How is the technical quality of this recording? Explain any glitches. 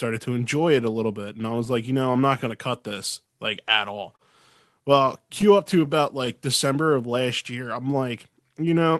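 The recording has a slightly unsteady pace and some small hiccups, carried over a call codec whose treble tops out around 12 kHz, which fits Opus at a modest bitrate.

Clock drift between sender and receiver runs through the whole clip. The delivery feels a touch slow and uneven because the sender's clock runs about 2% slower than the receiver's. The receiver's jitter buffer keeps draining, so it has to stretch the audio to avoid running dry.

Repeated timing corrections span 0.34 s to 8.74 s. They sound like faint stutters and a wavering tempo, with playback held near 99% speed. To keep in step with the slow sender, the receiver repeats short slivers of sound, adding roughly a tenth of a second overall at uneven intervals.

Scattered short gaps fall in two stretches. From 0.81 s to 4.21 s there are about seven brief ticks or smears, the longest roughly 30 ms. From 5.41 s to 7.13 s there are about four, each around 10 ms or less. 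Late or lost packets left small holes, and the receiver filled each one by extending the preceding sound.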